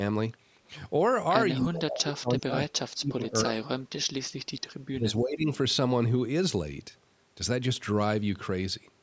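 From 1.59 to 3.68 s the speech sinks by up to about 35 dB, then dips again by about 15 dB from 4.89 to 5.49 s. This is likely speech suppressed in double talk, where an echo canceller mistakes the talker for loudspeaker echo. The waveform visibly shrinks, and the spectrogram shows faded bands.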